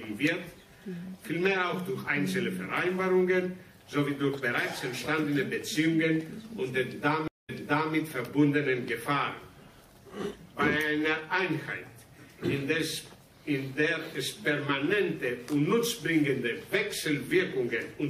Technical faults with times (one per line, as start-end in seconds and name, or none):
7.28-7.94 stream reconnect